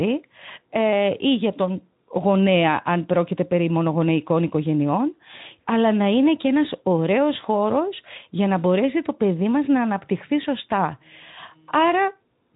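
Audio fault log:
The speech carries the character of a Speex link working as intended, consistent with a setting around 15 kbps, with nothing above about 3.8 kHz and only light coding texture, and no fault is present.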